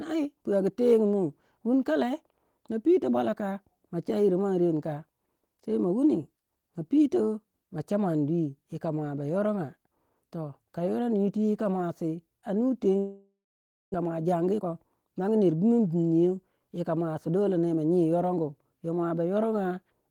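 Just after "yika muasi a nu", at 12.99 s, the speech breaks off. The last sound is stretched into a buzzy tail that fades away. Then there is about 580 ms of silence. Speech returns at 13.96 s, but roughly 600 ms of it never arrives. This is likely a long network dropout. The receiver filled the gap with concealment and then silence. The late audio left the delay about a third of a second longer.

From 14.03 s to 16.10 s comes a jitter buffer speed-up. The buffer held too much audio after the dropout. To shed that extra delay, the receiver cut out many tiny pieces, each a pitch period or so long. Around 300 ms was removed in total. The speech runs at about 116% speed, but its pitch stays the same. It sounds rushed.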